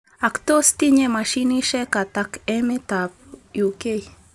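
A speech recording with a 50 Hz buzz running through it, the mark of a resampler restarted on every block during the 48 kHz to 24 kHz conversion. Each 20 ms block gets a small edge error, giving a tick train at the block rate. Unlike 50 Hz mains hum, it vanishes in the pauses, sounding only while there is signal.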